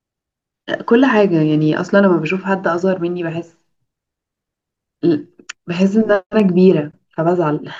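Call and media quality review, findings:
No faults found in the speech signal; level, continuity and timing show no technical problems on review.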